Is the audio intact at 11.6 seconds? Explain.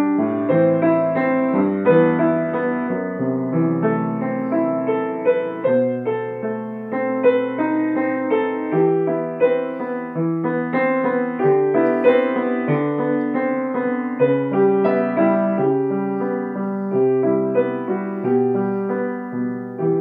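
Yes, at 11.6 seconds the audio runs cleanly, with no dropout, click, distortion or other fault to be heard at that moment.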